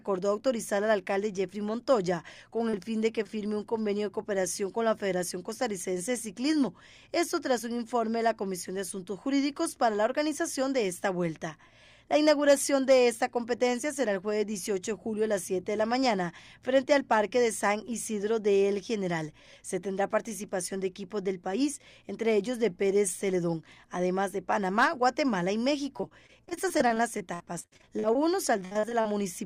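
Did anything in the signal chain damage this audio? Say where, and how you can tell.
Yes. At 2.69 s and 3.23 s there are brief smears, each a few hundredths of a second long. This is short concealed packet loss on the network. Roughly 40 ms and 20 ms of audio arrived too late, and the decoder papered over the holes by extending the preceding sound.

From 25.97 to 28.19 s, and again from 28.65 to 29.07 s, the audio turns choppy with pieces dropping out. That is repeated packet loss, giving robotic sound. Gaps of up to about 60 ms recur in quick succession, and concealment fills roughly a quarter, then nearly half, of each stretch.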